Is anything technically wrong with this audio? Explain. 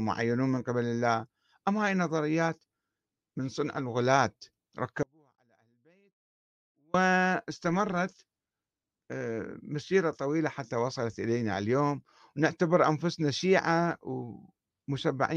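Yes. From 5.03 to 6.94 s there is an audio dropout to a faint residue: the speech cuts out abruptly for about 1.9 s, leaving only a faint trace roughly 40 dB down. The likely cause is a lost signal feeding a still-live path. The hard edges set it apart from a pause or fade.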